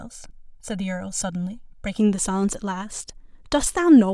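Channel delay (comb filtering) runs from 0.0 to 1.99 s. One channel arrives around a millisecond and a half late, and when both are summed to mono, shared content cancels at evenly spaced frequencies starting near 400 Hz. The speech sounds hollow and phasey.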